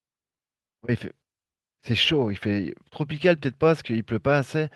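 Nothing in the speech here stands out as a technical fault, so there's nothing to flag.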